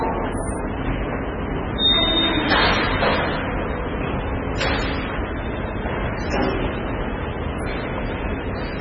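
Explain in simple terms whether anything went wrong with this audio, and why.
Something did go wrong: the whole clip has a watery, swirly quality and nothing above about 10.2 kHz, which points to heavy MP3 compression as the likely cause. Squeezed that hard, the encoder chops off the treble and lets faint details flicker in and out, smearing sharp sounds.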